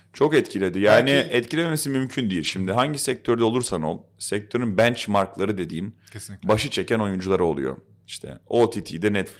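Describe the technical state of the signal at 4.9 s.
At 4.9 s the speech signal is intact, with no audible fault at that moment.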